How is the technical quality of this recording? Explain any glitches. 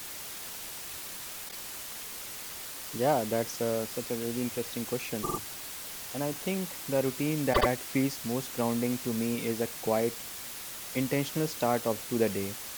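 The recording is poor: a heavy hiss runs throughout, and the sound stutters three times.

Low bit depth with dither: a steady, even hiss sits at about 10 dB below the speech, consistent with roughly 5-bit quantisation. Dither turns the rounding error into white noise, which shows as a uniform grey wash across the whole spectrogram.

Repeated frames: at 1.48 to 1.56 s, a 24 ms block plays twice more, adding 48 ms. At 5.22 to 5.38 s, after "such a really interesting", a 48 ms block plays three extra times, adding 144 ms. At 7.53 to 7.67 s, between "I think the routine" and "feels most grounding to", a 72 ms block plays twice more, adding 144 ms. The decoder replays the same compressed audio, so each event is heard as a stutter. A waveform shows identical copied segments, and a spectrogram shows repeating patterns.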